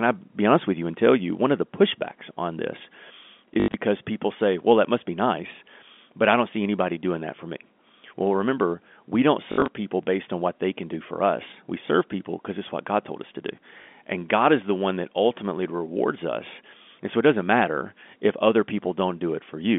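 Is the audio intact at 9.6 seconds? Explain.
No. From 9.52 to 9.68 s, packet loss with last packet repeated fills about 100 ms of gaps with replayed audio, giving a roughly 50 Hz robotic stutter.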